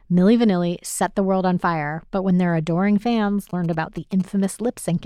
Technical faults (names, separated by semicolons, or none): GSM signalling bursts